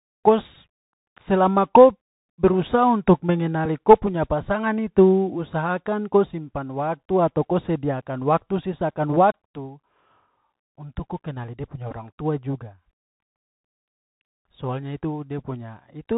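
Bluetooth CVSD headset codec, throughout: one-bit up-or-down coding with an adapting step cuts everything above 4 kHz, leaving scratchy s sounds, a granular hiss and distorted loud highs. Bluetooth headset packet repeated, at 0.54 s, at 3.65 s between "berusaha untuk" and "ko punya pasangan", and at 11.91 s between "kenali dia punya" and "tua juga": lost packets were replaced by replaying the previous packet. Each gap is short, about 11 ms, 4 ms and 7.5 ms, which fits runs of three, one and two repeated packets. Each is heard as a small tick or brief buzz.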